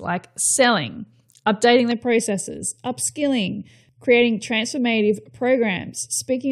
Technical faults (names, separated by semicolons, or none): channel delay (comb filtering)